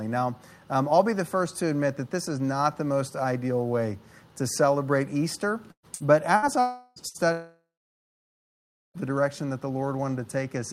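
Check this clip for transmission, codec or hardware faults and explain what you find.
The clip has a run of network faults between about 5.7 and 9.0 s. There are four short bursts of packet loss and two longer gaps that sound like network dropouts.

Burst of packet loss, at 5.71 to 5.86 s, 5.95 to 6.03 s, 6.36 to 6.45 s and 7.08 to 7.17 s. Each time, a chunk of audio never arrived. That is about 120 ms in the first case and about 60 ms in the others. The receiver kept repeating the last sound and faded it. This gives a brief buzz or hiss. In the first burst it dies to silence for about 80 ms. Then the audio jumps ahead, with the missing part skipped.

Long network dropout, at 6.60 to 6.99 s and 7.32 to 8.97 s. These gaps likely come from the connection stalling outright. The first loses about 0.36 s. It is filled entirely by a stretched, fading continuation of the last sound, with no silence. 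The second loses about 1.6 s. The filler fades away quickly, and about 1.3 s of dead silence follows. The audio then resumes further on, with that stretch gone.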